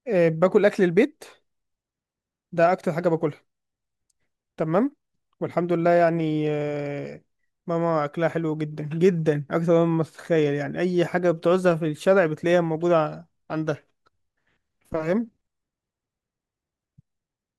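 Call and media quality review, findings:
No faults heard in this speech recording.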